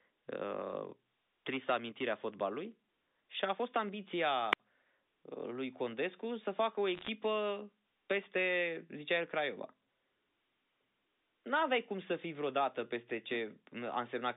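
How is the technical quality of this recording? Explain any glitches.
Two glitches stand out in this telephone-band speech, which is carried over G.711 coding limited to roughly 250 Hz to 3.7 kHz.

From 4.51 to 4.60 s there is a wireless microphone squelch dropout. The radio signal fades, and the receiver's squelch mutes the output for about 66 ms. You hear a brief gap of near silence.

From 6.95 to 7.09 s there are bit errors on the digital phone line. A small fraction of flipped bits corrupts individual samples. This produces sharp ticks and brief crackle over the speech.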